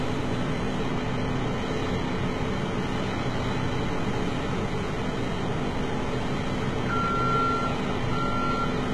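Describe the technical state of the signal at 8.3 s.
At 8.3 s, as throughout, the audio carries heavy damage, likely from HE-AAC compression near 16 kbps: replicated treble sounds gritty and metallic, and nothing remains above 11.8 kHz.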